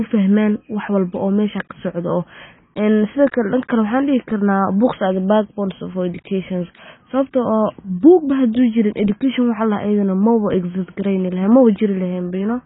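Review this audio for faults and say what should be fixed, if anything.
AAC compression damage runs through the whole clip: the speech has nothing above about 3.8 kHz, so it sounds dull and muffled, with a smeared, warbling texture where the encoder has dropped or roughly filled in parts of the spectrum. The heavy damage fits a very low bitrate near 16 kbps. The likely cause is an AAC-LC encoder starving its frames and cutting the bandwidth to spend its few bits on the lower range. To prevent it, encode speech at 64 kbps or more, or keep an uncompressed master for delivery.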